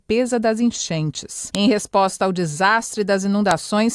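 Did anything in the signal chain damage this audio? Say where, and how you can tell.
Yes. Two sharp, loud clicks land at about 1.55 s and 3.51 s, each over in about a millisecond and unrelated to whatever the sound is doing at that instant. That abruptness points to a file header played as audio, a storage or file-joining fault: separate WAV pieces were spliced or streamed without stripping their headers, so a few dozen bytes of header data were decoded as samples, producing a brief burst of junk values at each join.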